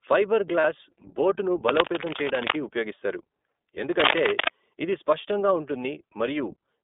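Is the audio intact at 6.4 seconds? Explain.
No. At 6.4 seconds the speech sounds thin and boxed in, with a rough, slightly synthetic grain. That damage runs through the whole clip, not just this moment. It comes from the iLBC codec. The line passes only about 250 Hz to 3.6 kHz, so the upper range is gone. iLBC also codes each 20 ms frame's excitation independently of the previous frame, which fits its 15.2 kbps mode and makes the roughness plainly audible.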